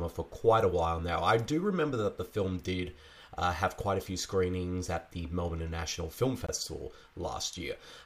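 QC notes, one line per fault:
6.47 s, block of digital silence: a short hole where about 20 ms of audio cuts to silence and returns with no fade.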